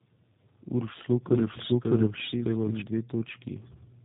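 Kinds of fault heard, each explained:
Tandem speech coding: throughout the clip, the speech went through two low-rate speech coders in turn, which fits an AMR-NB leg followed by G.729A. The second coder reworks the first's already damaged output, leaving it rough, muffled and warbly, with nothing above 3.8 kHz.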